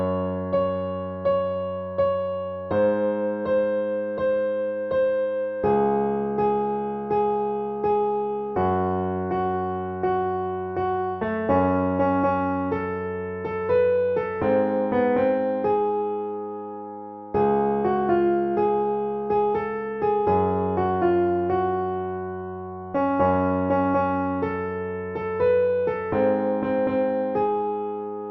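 No faults can be heard anywhere in the audio, so there is nothing technical to report.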